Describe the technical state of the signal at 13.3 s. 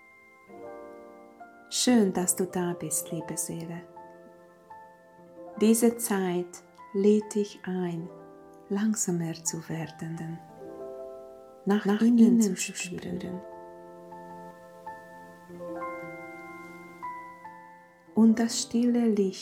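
At 13.3 s the signal carries a doubled audio track, running from 10.17 s to 14.51 s. A second full-band copy trails the original by roughly a fifth of a second at about the same level, likely because a slower capture path or an edit holds two unaligned copies. Unlike echo or reverb, the copy has no decay or room colour, and it begins and ends abruptly rather than fading.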